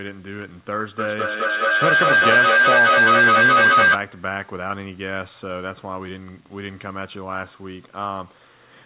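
From 0.99 to 4.09 s there is a feedback howl. Two call devices sharing a room looped loudspeaker into microphone, gaining level on each pass. The result is a tone near 1.5 kHz, swelling to about 10 dB above the speech and pulsing roughly every fifth of a second.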